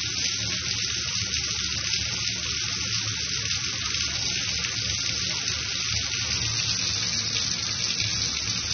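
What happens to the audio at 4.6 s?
At 4.6 s, as across the whole clip, the sound is dull and smeared with a fizzy, warbling texture, likely from AAC compression at a low bitrate around 24 kbps. A spectrogram shows nothing above 6.3 kHz.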